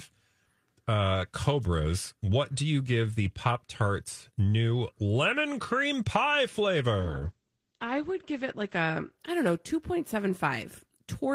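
From 7.01 to 9.75 s, after "new lemon cream pie", a call bitrate drop makes speech coarse and muffled above 8 kHz, without packet-loss gaps.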